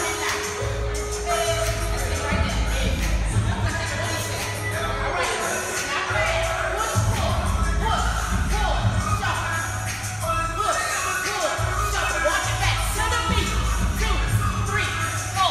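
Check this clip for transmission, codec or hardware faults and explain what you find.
Nothing stands out here: no dropouts, glitches or other transmission, codec or hardware trouble turn up anywhere in the audio.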